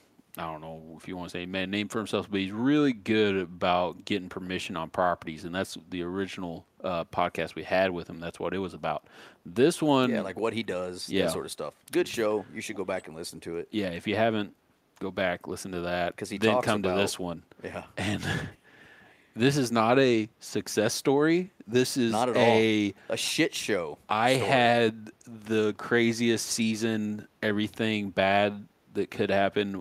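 At 12.72 to 12.78 s, a brief echo leak appears. A faint copy of the speech returns about 0.35 s late, roughly 20 dB below the direct sound. A second scrap follows at 12.97 to 13.03 s, quieter still, around 30 dB down. Both are short fragments, not a sustained echo. The likely cause is a far-end loudspeaker whose echo canceller let some of the returning signal slip through and sent it back.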